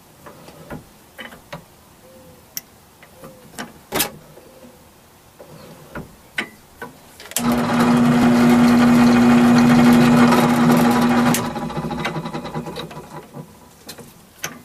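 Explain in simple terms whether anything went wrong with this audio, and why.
The sound skips twice, at 0.48 s and 8.23 s, each a tiny forward jump. This is likely a dropped buffer (overrun): the recorder fell behind, so about a hundredth of a second was overwritten and lost, and the surrounding audio was spliced together.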